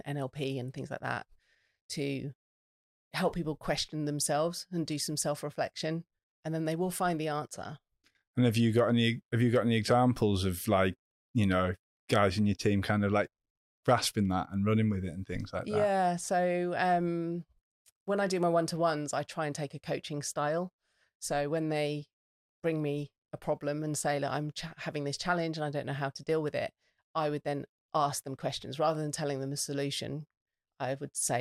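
No technical faults occur at any point in this recording.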